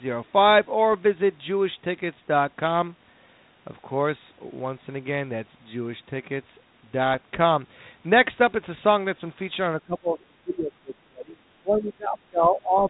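A speech recording that reaches the listener over an ADPCM link shows bit errors on the ADPCM link at 0.92–0.95 s and again at 7.14–7.17 s. Flipped bits corrupt the decoder's adaptive step size and prediction, and the error persists for some milliseconds instead of clearing within one sample. Each event is heard as a short pop with a rough, gritty burst and a brief change in level. The light coding damage on the speech fits a 32 kbit/s G.726 coder. From 9.83 s to the end, the speech is suppressed in double talk. This is likely an echo canceller that cannot separate the near talker from loudspeaker echo while both sides speak, so it attenuates its own outgoing signal. Across roughly 3 s the speech dips, thins out and breaks up in pieces, and at its deepest it falls by about 25 dB.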